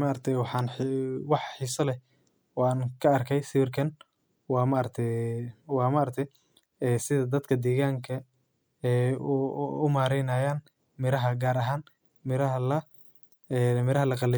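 No technical fault can be heard anywhere in the speech recording, with the signal staying steady and intact throughout.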